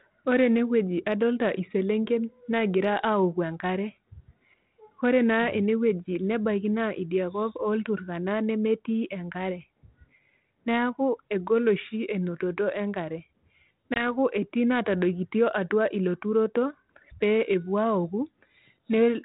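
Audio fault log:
13.94–14.04 s, packet loss on an ADPCM call: about one packet's worth, 20 ms, drops out and is replaced by silence, leaving a hard-edged hole. The decoder's adaptive predictor and step size then no longer match the sender's on this 32 kbit/s G.726 link, so the speech returns slightly distorted before settling by 14.04 s. A waveform shows a flat gap with abrupt edges, and a spectrogram shows a blank vertical strip.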